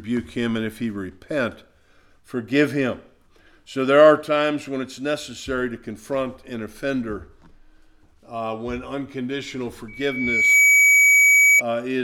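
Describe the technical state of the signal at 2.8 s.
At 2.8 s the signal is intact, with no dropout, distortion, glitch or other technical fault to be heard at that point.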